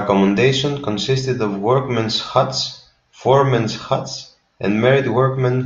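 Nothing in this recording jumps out as a technical fault, so there's no problem worth pointing to anywhere along the way.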